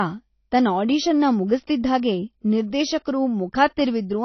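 Throughout the speech, nothing is heard above 6 kHz. The codec damage is plainly audible. The likely cause is AAC compression, AAC-LC, at a bitrate that fits about 24 kbps. The encoder dropped the upper band to save bits. The speech sounds dull.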